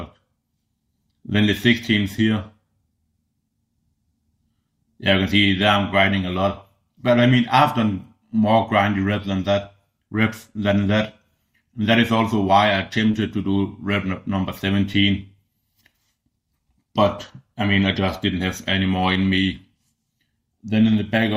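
Around 13.11 s there's a short concealed packet loss: about 20 ms never arrived, and the receiver papered over it by extending the preceding sound, leaving a quick smear or wobble.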